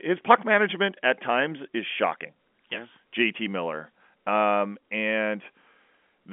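Nothing goes wrong anywhere in this one; it's just ordinary telephone-coded speech with the usual narrow line band, topping out at around 3.7 kHz, and no faults to point at.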